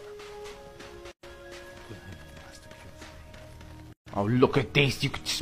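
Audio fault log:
1.11–1.23 s and 3.93–4.07 s: gap at a join of encoded pieces. Continuous sound stops dead for 118 ms, then 138 ms, where separately encoded pieces were joined with encoder delay and end padding left in. Spectrogram: blank vertical bands, slightly smeared edges; waveform: flat, then resumes.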